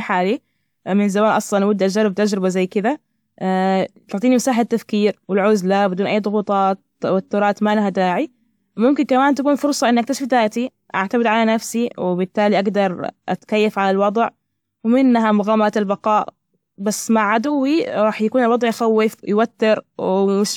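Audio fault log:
No faults found in this speech recording.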